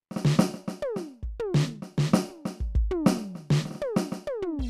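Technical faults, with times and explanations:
Nothing in this music stood out as a technical problem on listening.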